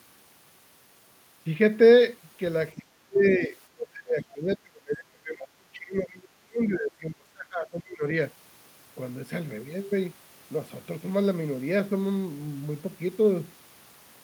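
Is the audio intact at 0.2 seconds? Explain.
Yes, at 0.2 seconds the audio is intact, with no audible fault at that moment.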